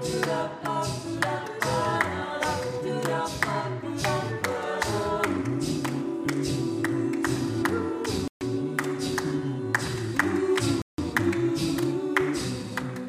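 A likely Bluetooth stall, where delayed packets drained the headphone buffer, cuts the sound to silence for 133 ms at 8.28 s and 165 ms at 10.82 s before playback resumes.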